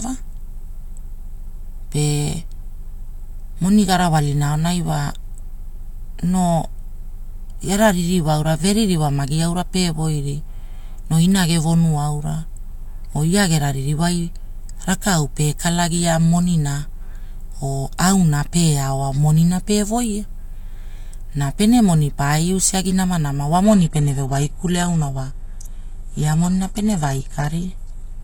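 At 23.64 s, right after "namanama wa", the speech switches abruptly to an adaptive stream at a lower bitrate and stays there to the end. The connection slowed, so the player fetched a leaner version. Treble above about 12.3 kHz vanishes, which fits a drop from 96 kbit/s AAC-LC to 16 kbit/s HE-AAC. Unlike packet loss, there is no gap or glitch, just a sudden, sustained step down in quality.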